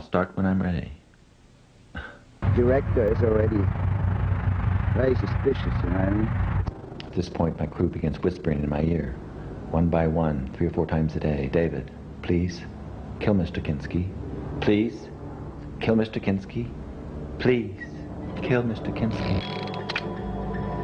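Overlap-add ripple runs from 3.08 to 9.12 s: mismatched frame overlap makes the level swing by about 6 dB around 30 times a second, giving a rough flutter.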